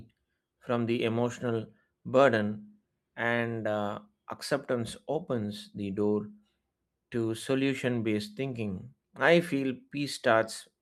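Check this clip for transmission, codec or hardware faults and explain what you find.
Nothing faulty can be heard anywhere in this speech.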